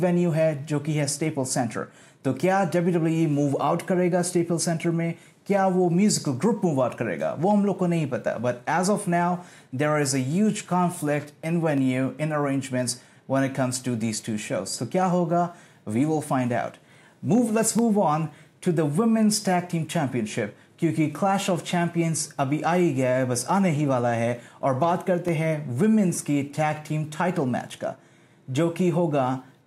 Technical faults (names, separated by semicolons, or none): dropped samples